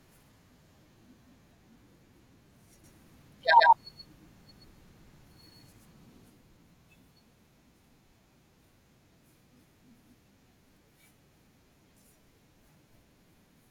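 From 2.84 to 6.30 s, a doubled audio track appears. An equally loud copy trails by roughly 150 ms, likely from a second, slower capture path.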